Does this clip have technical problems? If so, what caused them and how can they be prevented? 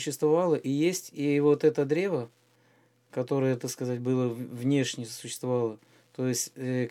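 Yes. Wi-Fi interference ticks faintly throughout, about ten times a second and far below the main signal, as the audio circuit rectifies a nearby radio's 102.4 ms beacon. A spectrogram shows evenly spaced thin vertical lines. Moving Wi-Fi devices away from the audio wiring prevents it.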